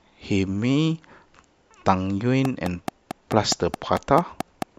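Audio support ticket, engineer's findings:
Train of clicks, 2.45–4.63 s: about ten regular ticks, 4.6 per second, spiking well above the speech; evenly spaced vertical broadband lines on spectrogram. Likely nearby equipment interference or a faulty connection or power supply.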